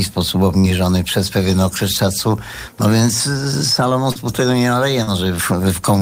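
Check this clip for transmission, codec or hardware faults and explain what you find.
Three instances of short concealed packet loss, at 0.59 to 0.67 s, 4.12 to 4.18 s and 5.03 to 5.10 s. Each time about 40 ms of audio arrived too late to decode, so the receiver extended the preceding sound before blending back, producing a brief smear or wobble.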